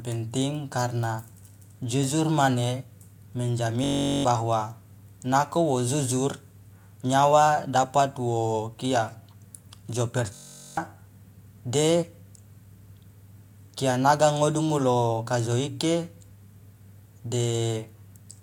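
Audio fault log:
3.84–4.25 s and 10.35–10.77 s, system hang loop: a 21.33 ms slice, which fits a 1024-sample buffer, repeats as a steady 46.9 Hz buzz while roughly 0.4 s of speech is lost.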